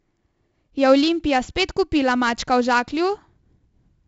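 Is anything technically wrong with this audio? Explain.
Yes. Throughout the speech, 4-bit ADPCM compression adds a gritty hiss that rises and falls with loudness, and sharp attacks distort where the adaptive step lags. Nothing appears above 7.8 kHz, which fits a 64 kbps stream at 16 kHz. A spectrogram shows level-tracking broadband noise and a hard ceiling.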